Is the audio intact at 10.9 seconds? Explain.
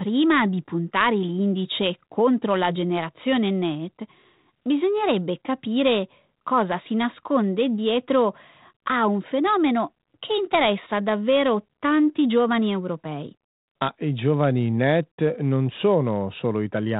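Yes, the audio is intact at 10.9 seconds, with no fault at that moment.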